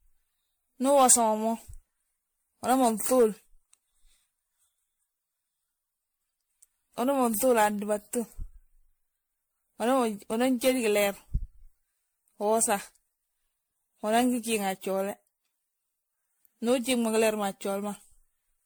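Across the whole speech clip there is generation loss, likely from MP3 encoding repeated some fifteen times on shifting frame grids, consistent with 96 kbit/s. The speech sounds swirly, hollow and smeared, with blurred consonant onsets. A spectrogram shows patchy holes, smeared transients and nothing above 19.9 kHz.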